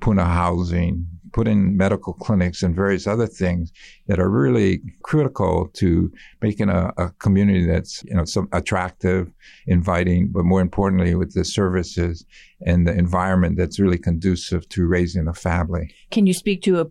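No technical faults can be heard anywhere in the recording; the signal stays continuous and steady throughout.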